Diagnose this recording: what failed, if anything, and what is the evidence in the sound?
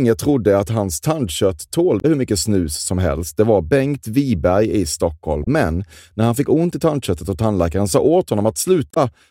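The failure is at the codec stage: damaged data in a compressed stream. Three short disturbances break into the speech, at 1.97 to 2.05 s, 5.43 to 5.47 s and 8.91 to 8.97 s, each lasting between about 40 and 80 ms and heard as a brief chirp, squawk, click or short hole. Corrupted bytes in the encoded file leave the decoder unable to interpret those frames, so it outputs garbage or drops them until it resynchronises on the next valid frame header.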